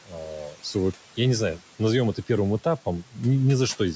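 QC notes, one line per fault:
0.06–0.15 s, speech cut by the noise suppressor: the suppressor took the opening for background and ducked it about 12 dB for roughly a tenth of a second, so it sounds swallowed.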